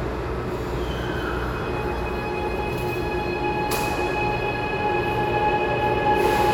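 From 2.48 to 2.69 s, frames out of order: two adjacent blocks of about 105 ms arrive swapped, so the sound flutters, garbled.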